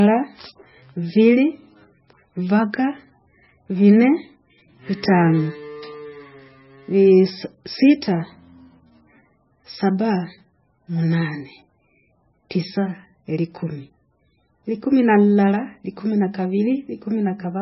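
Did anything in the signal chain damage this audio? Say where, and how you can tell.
Yes. Heavy MP3 compression runs through the whole speech clip at the codec stage. Nothing survives above about 5.6 kHz, and the sibilants sound watery and swirly, which fits a very low bitrate near 15 kbps, likely starving the encoder so it zeroes weak frequency lines.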